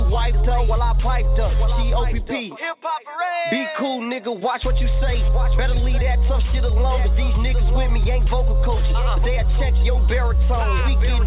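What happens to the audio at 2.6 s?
Nothing goes wrong at 2.6 s; the audio plays through that moment intact, with no audible fault.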